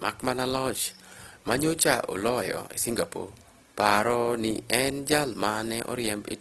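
Throughout, the speech sounds grainy and rough, with tones smeared into noise. This is Opus compression, likely from a low-rate music-mode encode near 16 kbps that refills starved bands with noise. A spectrogram shows a hard ceiling at 12.4 kHz and noise-textured bands below, with few holes.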